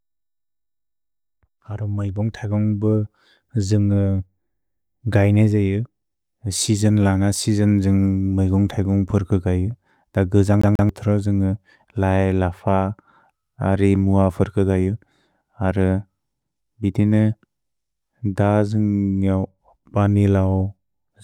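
A quick, even stutter at 10.61 s runs to 10.89 s: a snippet of speech about 140 ms long plays twice, with a brief mute at each jump. This is the CD stuck on one turn, where a scratch keeps throwing the laser back one track.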